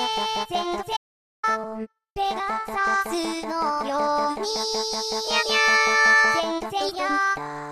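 At 0.97 s the audio drops out to silence and stays out until 1.43 s, roughly 0.47 s of material lost. The gap is silent, with no background or room tone underneath, so the sound stops abruptly and resumes mid-flow rather than fading. The cause is likely a momentary loss of the input signal, such as a disconnected device or link, while the recorder kept writing silence.

Shortly after, at 1.63 s, compressed frames are skipped. The decoder jumps past about five frames of 23.2 ms each, discarding around a tenth of a second of audio. It comes through as a jump where the sound lurches forward, with the skipped portion simply absent.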